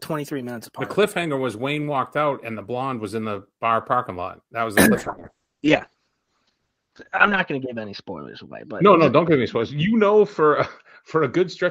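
A speech recording that turns rough and muffled at 4.96 s and stays that way through the end. This is a call bitrate drop: the encoder's budget falls from 32 to 7 kbps, and it sits at that floor for about 2.45 s. The coarser coding causes the grainy, watery texture. The audio band also narrows from 20 kHz to 8 kHz, so on a spectrogram everything above 8 kHz disappears.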